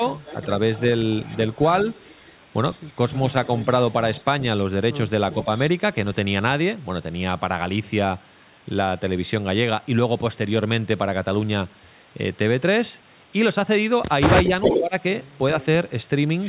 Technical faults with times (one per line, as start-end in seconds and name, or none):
0.22-0.82 echo leak
1.29-1.36 echo leak
2.00-2.32 echo leak
3.14-4.22 echo leak
5.32-5.59 echo leak
14.46-14.80 echo leak
14.48-14.94 speech suppressed in double talk
15.60-15.65 echo leak